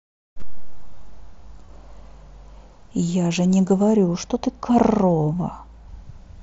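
At 0.41 s and again from 1.66 to 1.69 s, there is concealed Bluetooth headset packet loss. Each gap is about 22.5 ms, which fits three lost frames. The receiver filled it by repeating recent waveform. Both sound like a brief buzzy flutter in the speech.

From 3.83 to 5.88 s, de-emphasis was applied wrongly. A treble cut meant to undo boost was added where none existed or was applied twice. The top falls about 8 dB at 10 kHz relative to 1 kHz. The speech turns dull and muffled, on top of the mSBC codec's 8 kHz limit.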